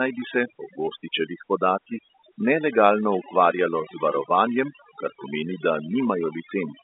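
Speech over a telephone line, band-limited to roughly 250 Hz–3.7 kHz, suffers overdone noise removal throughout: gaps sink to near silence with twinkling specks. Unlike codec smearing, the damage tracks the noise floor, not the bitrate.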